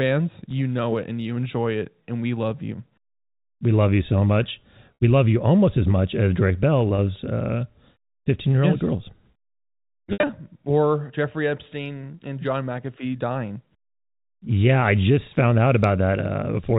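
Packet loss with pitch repetition occurs at 4.94–5.00 s (60 ms), 6.96–6.98 s (20 ms), and 10.13–10.29 s (110 ms lost in bursts, longest 70 ms). The receiver bridges each gap by repeating the last pitch period, so the sound briefly holds with a buzzy, droning tone. In the longer 10.13 s gap this fades towards silence before the sound cross-fades back, all over the narrow G.711 telephone band.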